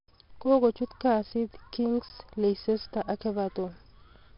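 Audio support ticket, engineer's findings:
Gritty hiss riding every loud syllable, whole clip; attacks grainy, speech dull with nothing above 5.3 kHz. Heavy 4-bit ADPCM compression: coarse steps from a prediction, noise tracking signal level, step adaptation lagging transients. Bandwidth suggests a low sample rate; bitrate 44 kbps.

Tick at 2.09 s, a 15 ms hole in the speech. Block of digital silence: samples zeroed, hard cut out and back with no fade. Probable component: output buffer not filled in time.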